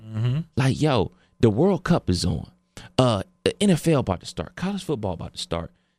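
At 4.12 s there's a sudden gain jump: speech and background noise drop together by about 5 dB and stay down, likely an unramped gain change.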